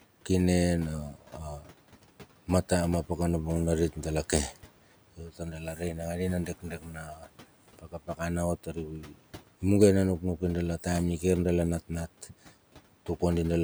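Four patches of speech cut by the noise suppressor, at 5.17–5.81, 6.47–7.27, 7.79–8.2 and 8.63–9.19 s. It mistakes quieter speech for the room noise and pulls it down about 11 to 12 dB, so parts sound swallowed.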